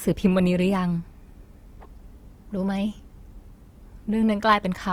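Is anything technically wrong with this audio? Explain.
Yes. Throughout the speech there is plainly audible Opus compression, likely from a low-bitrate music-mode encode that fills starved bands with folded energy or noise, leaving tones grainy and rough.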